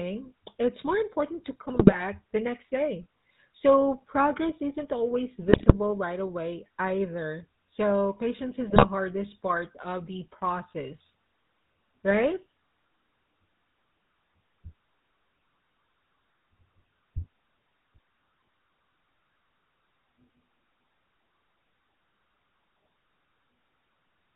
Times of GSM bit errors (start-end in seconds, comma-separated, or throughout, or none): 1.74-2.02, 5.48-5.74, 8.70-8.86